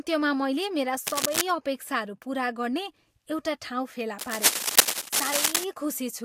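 From 1.06 to 1.42 s, after "मैले मेरा" and before "अपेक्षाहरू पुरा गर्ने", a scratching, rustling burst of cable scratch noise sits over the speech at about its level. It returns from 4.19 to 5.64 s, after "ठाउँ फेला", somewhat louder than the speech. The likely cause is a worn cable or connector being moved, its contact resistance jumping about. Unlike isolated clicks or crackle, the noise is dense and uneven throughout each stretch.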